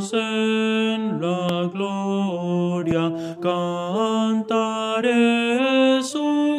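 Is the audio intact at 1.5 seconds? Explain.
No, there's a loud pop from about 1.49 to 1.52 s, a single sharp hit that jumps roughly 15 dB above the surrounding sound while the audio keeps running underneath it. It's likely a sudden voltage step or spike, from something like a plug, a switch, static or a driver hiccup, getting added straight into the signal, with the downstream circuitry rounding it off into that short, punchy thump.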